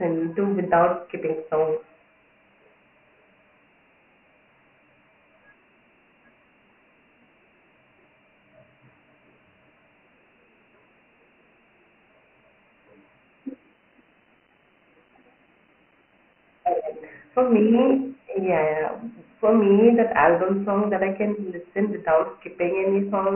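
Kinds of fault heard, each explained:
Dialogic VOX ADPCM: the speech has been squeezed through 4-bit adaptive differential coding at a rate that fits 24 kbps, and so most likely 6,000 samples a second, leaving nothing above 3 kHz and a thin, telephone-band low end from about 200 Hz. The coding damage is heavy, with a gritty hiss that rises and falls with the speech. On a spectrogram there is a hard ceiling at 3 kHz and grainy noise filling the gaps between harmonics, while the waveform looks coarse and stepped.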